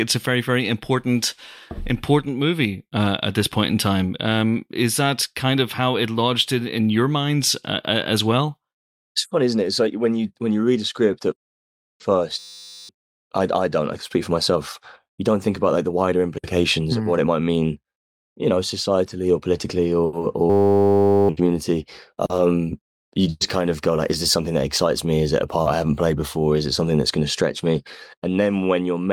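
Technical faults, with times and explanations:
12.39–12.89 s and 20.50–21.29 s, system hang loop: a frozen 10 ms buffer replays, buzzing at 100 Hz as evenly spaced harmonic stripes and identical repeating waveform cycles.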